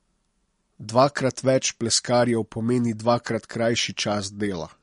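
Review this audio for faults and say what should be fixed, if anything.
Throughout, the speech sounds watery and swirly, with nothing above 10.6 kHz; this is likely MP3 compression at a low bitrate, consistent with about 44 kbps.

From 0.51 to 4.16 s, about five faint ticks fall roughly once a second. These are clock slip clicks, each a single sample dropped or repeated, likely because two unsynchronised clocks drift roughly 30 ppm apart.

To prevent both, encode at a higher bitrate or in a lossless format, and lock all devices to one shared clock or resample between clock domains.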